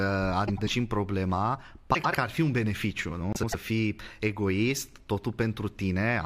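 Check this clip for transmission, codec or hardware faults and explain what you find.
There's one problem, repeated three times: frames out of order, at 0.47–0.69 s, at 1.94–2.15 s just before "ar fi un beneficiu", and at 3.33–3.55 s between "ar fi un beneficiu" and "fii egoist". Each time, two neighbouring 96 ms blocks are swapped, which fits runs of four frames, so the speech flutters.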